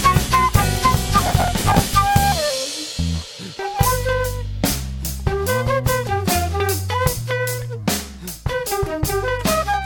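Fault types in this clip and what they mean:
Processor overload crackle: the audio processor falls behind and cannot finish its short buffers before each playback deadline, so the output fills the gaps by repeating stale audio with hard edges. In this music it runs from 1.23 to 1.93 s as a gritty tearing laid over the sound. The misses come in a dense run, which fits buffers of roughly 5 ms with a few dozen missed. That density and the clean stop when the load eases set it apart from a single isolated dropout click.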